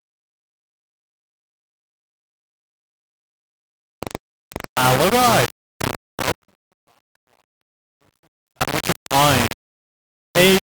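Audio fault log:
Throughout: low bit depth without dither, heavy grainy distortion tracking the sound, likely from rounding to about 3 bits, leaving error nearly as loud as the signal.
6.32 to 8.60 s: audio dropout to a faint residue, signal abruptly lost for 2.28 s with only faint sound about 40 dB down, likely a break upstream of a live path.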